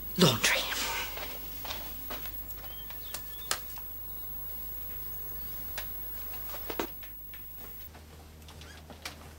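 The audio has a section at the wrong speed. From 7.87 s to the end at 9.38 s, the sound runs 1.55 times too fast, so it becomes hurried and jumps up about seven semitones in a single step. The likely cause is playback or editing against the wrong clock. Unlike a pitch shift or a time-stretch, which change only one property, this section changes tempo and pitch together, locked in the same ratio.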